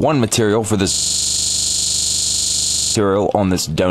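From 0.94 s to 2.95 s the audio locks into a system hang loop. The same 40 ms fragment repeats end to end about fifty times, a rate of 25 Hz, heard as a hard, rattling stutter that sits close to a low buzz. This happens when the computer or its audio driver stops supplying new samples while the sound hardware keeps replaying the last ring buffer, which here fits a 40 ms buffer.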